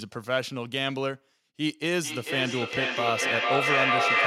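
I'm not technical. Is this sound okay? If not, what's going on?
No. Feedback echo between two devices, from 1.99 s: another device replays the speech, which loops back roughly every 0.4 s, building up louder than the original.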